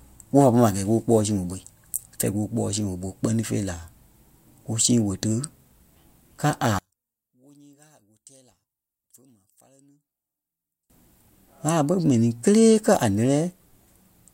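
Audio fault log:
6.79 to 10.90 s, one channel inverted: the likely cause is one stereo channel flipping polarity, so when the two channels are summed to mono the speech, which sits equally in both, cancels against itself. For about four seconds the level drops by about 37 dB, leaving only a faint trace of whatever differed between the channels, before the speech returns at 10.90 s.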